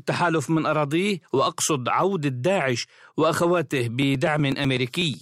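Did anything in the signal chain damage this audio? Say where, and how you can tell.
Yes. From about 4.02 s to 5.14 s the speech picks up a run of regular ticks, roughly ten of them, spaced 0.124 s apart, so they have a steady, mechanical rhythm that the speech itself doesn't have. These are periodic USB or driver dropouts, at the driver or buffer stage. Something stalls the USB bus or audio driver at a fixed interval. Each time, roughly a millisecond of audio is skipped outright, and the jump in the waveform sounds as a click.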